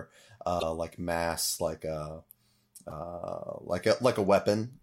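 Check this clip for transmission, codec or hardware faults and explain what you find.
Two short faults from damaged data in a compressed stream, at 0.59 to 0.63 s, just before "like mass like uh", and at 2.87 to 2.92 s. In each spot some bytes of the encoded speech arrived corrupted, so the decoder misread those frames, lost its place and had to hunt for the next valid frame header before resuming. The result is a brief chirp or squawk, about 40 and 50 ms long, cutting into the speech.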